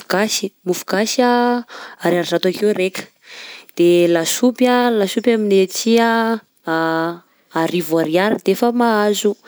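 Speech recording, no technical faults detected.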